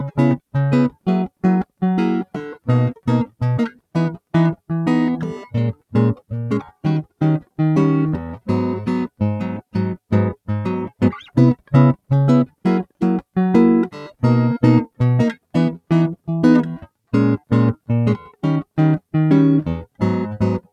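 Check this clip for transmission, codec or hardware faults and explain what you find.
One fault runs through the whole piece of music: a noise suppressor applied to music, left active from start to finish. Designed for speech, it treats sustained tones, ambience and reverb as noise and pulls them down while transients pass, so the level swings by about 5 dB and held notes and decays sink and pump. On a spectrogram, sustained partials fade and break into patchy bands after each onset; the waveform shows tails dropping early between attacks.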